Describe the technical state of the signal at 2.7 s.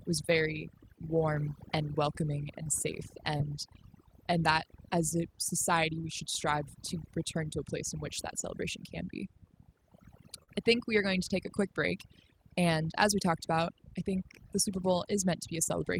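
Short concealed packet loss sits just before the 2.7 s mark, from 2.63 to 2.67 s. About 20 ms of the stream never reached the decoder in time, and the receiver bridged roughly 19 ms of that gap with synthesised audio. It extended the sound that came just before and then cross-faded back into the real signal. The splice shows up as a brief smear in the speech at that instant.

At the same moment, as everywhere in the clip, overdone noise removal is at work. The suppressor is set so aggressively that frequency bands sitting near its noise estimate are pulled far down or switched off, and the quieter components of the speech are cut along with the noise. In the gaps the background drops and breaks up into twinkling specks.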